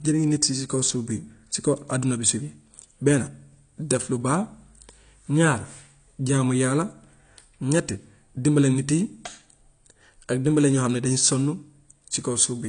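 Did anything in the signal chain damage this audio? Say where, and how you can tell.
Yes, at the codec stage: the speech sounds dull and smeared throughout, with nothing above 9.8 kHz, likely AAC compression at a low bitrate around 32 kbps. A spectrogram would show a flat ceiling and patchy high bands.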